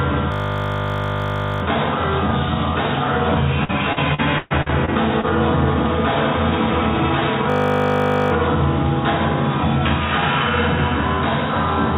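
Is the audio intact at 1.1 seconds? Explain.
No. A system hang loop runs from 0.32 to 1.62 s. The system froze while the sound hardware kept replaying one 20 ms piece of its ring buffer. That slice repeats 50 times a second, so 1.1 s sounds like a steady 50 Hz buzz.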